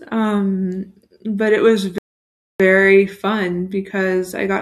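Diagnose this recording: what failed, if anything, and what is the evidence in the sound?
The fault sits at the playback stage: a rebuffering stall. Just after "it was", the speech drops to silence at 1.98 s. It stays silent until 2.60 s. Then it picks up exactly where it stopped, with no syllable missing or repeated. The player ran dry of downloaded audio and simply waited for more to arrive. No content was lost. The gap just inserts about 0.61 s of dead air.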